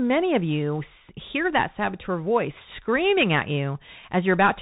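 The whole recording comes through the Bluetooth CVSD headset codec, that one-bit-per-sample delta scheme running at 64 kbps. Nothing gets above 4 kHz, so the speech sounds narrow, sibilants turn scratchy where the step size can't keep up, and a grainy hiss sits underneath throughout.

Right after "hear that saboteur voice", at 2.70 s, there's a Bluetooth headset packet repeat. About 3.8 ms went missing and the decoder replayed the previous chunk instead, which sounds like just one packet. You only get a brief tick there, not a sustained buzz.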